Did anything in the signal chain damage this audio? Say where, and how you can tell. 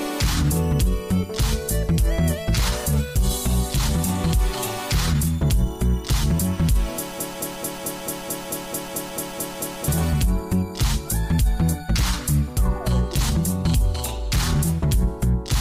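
Yes, a broken-record loop from 7.20 to 9.88 s: one 0.22 s fragment repeats twelve times, likely a stalled playback buffer. Spectrograms show identical tiled blocks.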